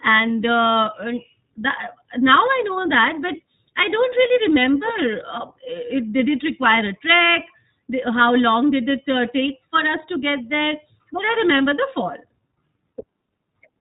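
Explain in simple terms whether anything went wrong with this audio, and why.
Yes, something went wrong. The whole speech recording passed through the iLBC codec, a phone-call compressor that discards everything above 4 kHz and rebuilds each short slice of sound separately, so from start to finish the speech sounds muffled, slightly rough and noticeably artificial.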